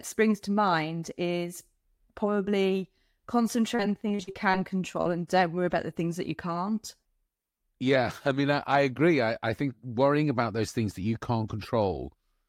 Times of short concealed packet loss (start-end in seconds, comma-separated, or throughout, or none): 5.01-5.07